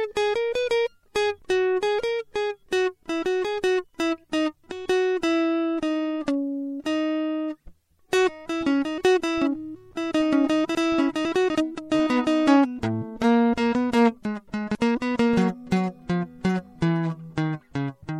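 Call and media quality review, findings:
Watery, swirly texture through the whole music clip, with metallic chirps on cymbal-like transients and smeared attacks; likely MP3 compression at a low bitrate, with damage plainly audible, consistent with about 64 kbps. Encoder starving for bits, cutting treble and zeroing weak frequency lines. Spectrogram: hard ceiling on the treble, speckled holes flickering frame to frame below it.

Chunks out of order at 10.75–11.5 s: a 250 ms chunk plays two chunks late, giving a jumbled passage with hard joins. Same at 14.25–14.75 s, one chunk late. Probable buffering or write-ordering fault. Waveform: abrupt discontinuities at 250 ms boundaries, with a segment displaced from its proper place in the envelope.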